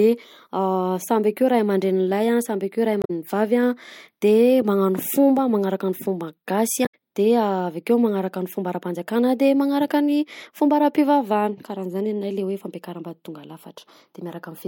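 Damaged data in a compressed stream occurs twice in this speech, from 2.99 to 3.10 s and again from 6.82 to 6.94 s, each lasting about a tenth of a second. In both places the encoded bytes are corrupted, so the decoder misreads the affected frames, loses its place in the stream and has to hunt for the next valid frame header. Each event comes through as a brief chirp, squawk, click or short hole breaking into the speech.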